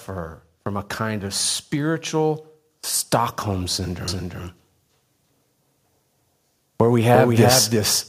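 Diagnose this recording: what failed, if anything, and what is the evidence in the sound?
Automatic gain rising, in call processing. From 0.07 to 2.46 s, speech and background swell together by about 4 dB. The gain control judged the input too quiet.

Doubled audio track from 4.08 s to the end. A full-band copy trails by roughly 300 ms, a few decibels quieter, with no room colour. Likely a second, slower capture path.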